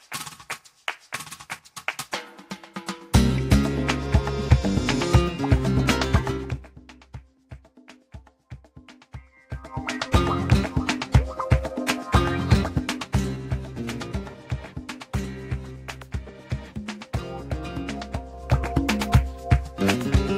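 A ticking, zipping texture rides on the sound at 6.28–6.76 s, 9.28–10.04 s, 12.64–13.68 s and 18.28–18.64 s. This is zipper noise: level moves of around 10 to 20 dB arrive in unsmoothed 3 dB jumps, each jump clicking.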